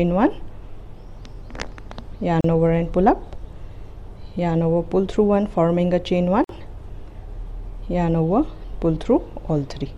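At 2.41 s the sound drops out for about 35 ms, and again at 6.44 s for about 49 ms, each a brief hole with smeared edges before the sound resumes where it stopped. This is a gap at a join of encoded pieces, recurring every 4 s: separately encoded segments were butted together untrimmed, so each encoder's leading delay and last-frame padding remain as silence at every seam.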